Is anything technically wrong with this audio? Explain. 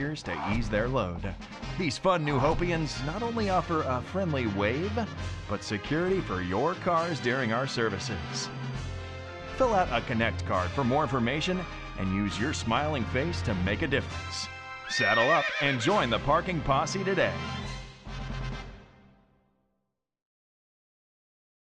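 No, nothing technical stands out here; the audio comes through steady and intact, with no problems to point to.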